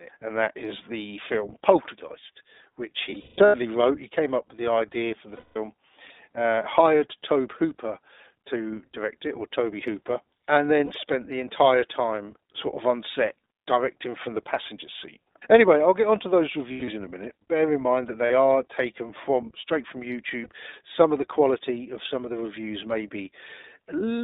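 Throughout, the speech carries the iLBC codec sound. Nothing passes below about 250 Hz or above 3.7 kHz. Each short frame is coded on its own, which leaves the voice clear but rough and synthetic. The texture fits 20 ms frames at 15.2 kbps.

Lost iLBC frames interrupt it six times: 3.10 to 3.56 s, 5.36 to 5.58 s, 10.86 s, 16.72 to 16.90 s, 18.26 s, and 20.44 s. At each gap the decoder repeats the last pitch cycle with noise, so a buzzy, held vowel replaces the sound. The first gap is the longest. Its worst run lasts around 200 ms and fades toward breathiness. The 16.72 s gap falls between "I'll get onto those" and "in a minute". The 18.26 s gap falls between "in mind that" and "are taken from straight". The 20.44 s gap follows "taken from straight from". The voice recovers almost at once after each.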